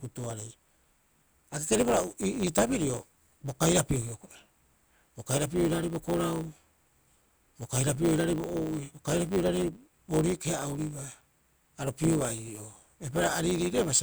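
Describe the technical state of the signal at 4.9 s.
At 4.9 s the speech carries a steady buzz at 100 Hz and moves slightly hurried, about 1.07 times normal speed, while its timbre stays the same. This is a block size mismatch (truncated), present for the whole clip: one stage hands over longer blocks than the next takes in, which fits 512-sample blocks being written. The tail of each block is discarded, so the clip runs fast, and those cuts, repeating 100 times a second, produce the buzz.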